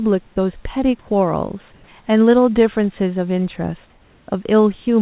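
Speech over a call line that carries nothing above 4 kHz. From 1.74 to 1.88 s, comfort noise takes the place of the background. For those 140 ms, the real room noise, about 35 dB below the loud parts, turns steady and featureless at the same level. The likely cause is discontinuous transmission, with the receiver filling the pause with synthetic noise.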